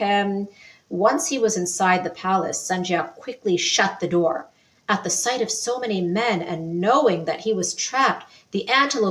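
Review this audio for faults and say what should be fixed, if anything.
A noise suppressor applied to music or sounds runs through the whole clip. The processor was built for speech, so it treats sustained, steady material as noise and keeps pulling it down, producing a gain swing of around 5 dB that comes and goes. Transients pass mostly intact while held sound and decays are attenuated, which makes the level pump and the texture thin out between attacks.

There are three deeper dips, each heard as sound cut by the noise suppressor: 0.51 to 0.92 s, 4.45 to 4.88 s, and 8.27 to 8.54 s. In each span the suppressor classified the material as noise and cut it by up to about 12 dB. The first two last roughly 0.4 s and the third roughly 0.3 s. The sound drops audibly, and its sustain or tail is truncated instead of fading naturally.

To prevent this, bypass or disable the speech noise suppressor for non-speech material, or switch the input path to a music or original-sound mode.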